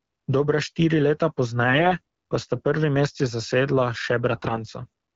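Speech clip carried over wideband AMR, and it picks up AMR bit errors twice: from 1.68 to 1.93 s, between "štiri leta" and "pa sta", and again from 4.29 to 4.63 s. Roughly one bit in twenty of the lightly protected payload is flipping, so the excitation pulses and fine gain and spectral values come out wrong. The voice keeps its pitch and level but turns hoarse and gargly.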